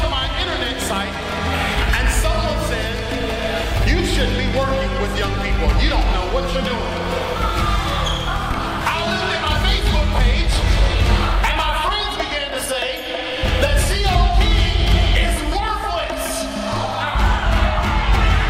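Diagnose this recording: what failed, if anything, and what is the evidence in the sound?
Nothing failed; no stage in the chain leaves any audible evidence of trouble anywhere in the recording.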